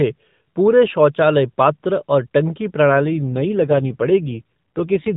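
At 2.90 s the speech turns rougher and more synthetic and stays that way to 5.16 s. This is an AMR rate drop. The mobile codec falls to a lower speech rate, with fewer pulses to model each frame. The sound fits a step from 12.2 kbps down to about 5.9 kbps. Unlike a dropout or a bandwidth switch, nothing goes silent and the band doesn't narrow. It stays at the same 4 kHz ceiling as the lightly coded AMR-NB audio before it, and only the texture degrades.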